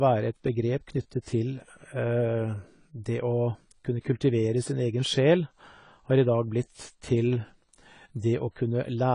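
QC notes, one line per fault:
Throughout, AAC compression: the audio was likely coded with a low-bitrate AAC-LC encoder, and the damage fits roughly 24 kbps. Coarse quantisation removed everything above 10 kHz and thinned the remaining spectrum, leaving the speech dull and smeared, with plainly audible coding damage.
1.22 to 1.26 s, pre-echo: a sharp attack fell late in a transform block, so quantisation noise sized for the loud onset was spread back across the quiet stretch before it. A 40 ms hiss precedes the attack, which sounds softened and smeared.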